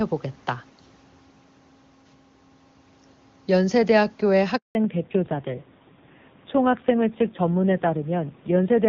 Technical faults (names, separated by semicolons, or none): handover gap; fallback to narrowband